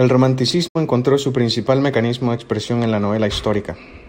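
At 0.67 s a digital broadcast dropout mutes the speech for about 0.1 s. Failed frames silence the receiver, fading out over 20 ms. Sound returns at "encontró su principal mecanismo".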